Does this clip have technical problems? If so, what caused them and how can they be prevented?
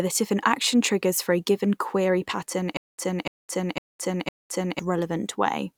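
Yes. Right after "a given query pattern", from 2.77 to 4.79 s, there's a stutter with silent gaps. A 294 ms burst replays four times, each followed by 212 ms of dead silence, so it repeats every 505 ms. The likely cause is the player or stream stalling and replaying its last fragment on each retry, and the audio meant for that stretch is lost. Bigger playback buffers and steadier delivery would prevent it.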